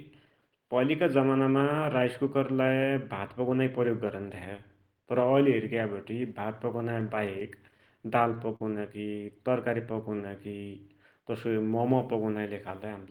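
From 7.00 to 8.61 s there are scattered short gaps. About seven lost or late packets were patched by extending the preceding sound, the longest around 40 ms, leaving brief ticks and smears. From 9.49 to 10.49 s comes a jitter buffer slow-down. Repeated pitch periods add 62 ms, so speech runs at 95% speed, drawn out but unchanged in pitch. From 12.50 to 13.10 s a jitter buffer speed-up trims about 50 ms of pitch periods. Speech runs at 107% speed and sounds hurried.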